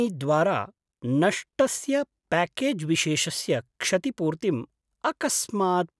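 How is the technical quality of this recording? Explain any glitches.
No glitches can be heard anywhere in the recording, and the signal stays continuous and steady throughout.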